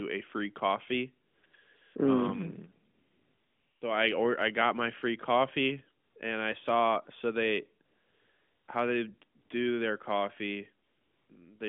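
AMR comfort noise replaces the background at 1.28–1.44 s, 1.46–1.54 s, 1.56–1.96 s after "a free coffee", 2.94–3.82 s before "so I or I", 6.04–6.16 s, 7.86–8.68 s, 9.38–9.50 s between "how they" and "do their coffee", and 10.86–11.30 s. In each gap the phone judged the talker silent and stopped sending speech frames, so the receiver synthesised noise from a coarse level-and-spectrum description. The real ambience drops out, and a smooth, steady hiss switches in and out of the narrowband line.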